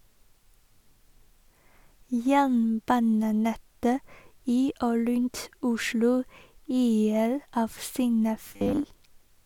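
From 8.48 to 8.84 s the speech takes on robotic sound from repeated short buffers: a stiff, metallic buzz at 100 Hz that still loosely traces the syllables. The likely cause is audio arriving too late, so a short chunk, about 10 ms, fits that pitch, gets replayed to fill the gap, with roughly half the material repeated. A spectrogram shows evenly spaced horizontal harmonics on 100 Hz; the waveform shows identical cycles tiling the span.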